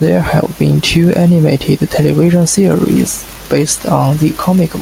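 It's a short speech clip with gain pumping all the way through: the gain swings by roughly 5 dB, and the room noise sits about 38 dB under the voice, so everything sounds squashed, likely from gain set far too high and a fast limiter clamping down.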